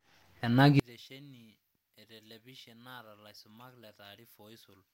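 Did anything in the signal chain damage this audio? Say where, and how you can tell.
Yes: one channel inverted, likely a polarity swap in the analogue wiring. From 0.80 s to the end, the mono sum drops by about 29 dB, leaving only faint speech.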